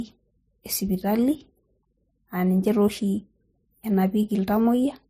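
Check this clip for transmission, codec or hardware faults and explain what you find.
One codec fault runs through the whole clip.

From start to end, the speech carries stacked compression artefacts and no content above 15.2 kHz. This is transcoding between lossy codecs, likely HE-AAC followed by MP3, with the sound pointing to rates near 40 kbit/s. The MP3 stage spends bits re-coding the earlier artefacts and adds its own. Both layers are heard together.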